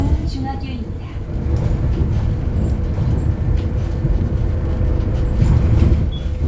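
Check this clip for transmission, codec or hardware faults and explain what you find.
No transmission, codec or hardware faults.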